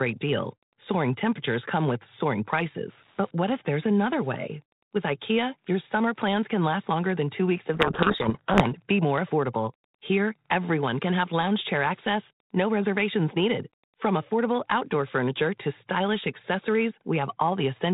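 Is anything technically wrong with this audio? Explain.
Yes. From 7.74 to 8.79 s, between "than two weeks of" and "be more affordable", the speech is buried under harsh, grinding distortion. This is a codec payload misread: the G.726 code words arrive with their bit order reversed, so the decoder rebuilds wrong sample differences until the packing matches again.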